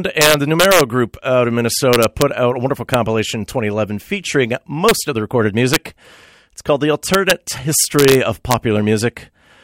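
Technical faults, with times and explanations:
0.22–0.81 s, 1.93–2.22 s, 2.94 s, 4.89–4.91 s, 5.74–5.76 s, 7.14–7.31 s, 7.99–8.15 s, 8.51–8.54 s, integer overflow: harsh, violent cracks on loud speech peaks. Peaks driven about 1 to 3 dB past the integer limit wrapped to the opposite sign instead of being clamped, throwing the waveform across its full range.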